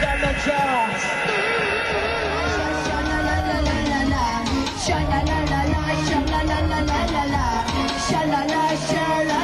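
No technical faults can be heard anywhere in the signal.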